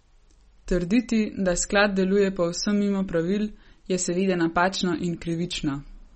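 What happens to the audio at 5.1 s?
At 5.1 s the speech has the damage heard through the whole clip, likely from MP3 compression. Nothing sounds above 8.4 kHz. Weak frequency lines flicker between frames. That gives a plainly watery, swirly tone, which fits a bitrate near 33 kbps.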